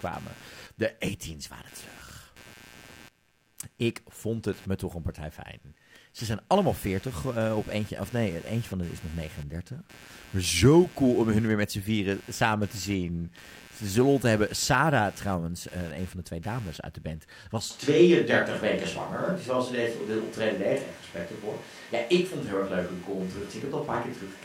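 Computer activity noise runs through the whole recording: a buzzing, chirping texture pulsing at roughly 100 times per second, sitting about 25 dB below the speech. It follows the computer's workload rather than the talking. As the processor, graphics card or mouse draw varying current, the ground shared with the audio circuit shifts, and those shifts leak straight into the signal as this rhythmic interference beneath the voice.

A switch to a distant microphone comes at 17.7 s, right after "uit de band was", and lasts to the end. The voice abruptly turns roomy and hollow, losing bass. The overall level stays roughly the same, but background room noise rises to about 30 dB below the speech. The likely cause is that the close microphone's signal dropped out or was left out, leaving a pickup placed further away, such as a camera's.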